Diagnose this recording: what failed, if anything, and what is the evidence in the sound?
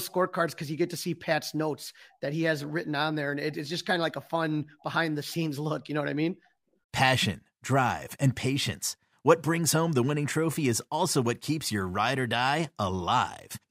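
Clock slip clicks at the converter stage: faint, evenly spaced ticks run from 0.13 s to 13.6 s, roughly one every 0.15 s. Two device clocks likely run unsynchronised, around 150 ppm apart, each slip dropping or repeating one sample. Steady spacing, not irregular gaps, rules out buffer underruns.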